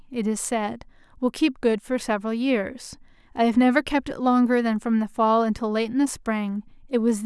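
A short piece of speech, and there's nothing technically wrong to point out anywhere in it.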